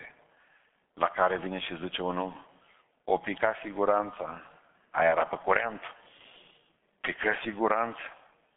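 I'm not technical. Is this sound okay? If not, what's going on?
No. Throughout the whole clip, the speech has been squeezed through the G.723.1 codec, an early internet-phone system that packs speech into very little data. It keeps only a narrow slice of sound, with nothing above about 3.8 kHz, so everything comes across muffled and boxy. It rebuilds the voice in coarse 30 ms chunks from a simplified model, which is why the speech sounds hoarse and the consonants smear together.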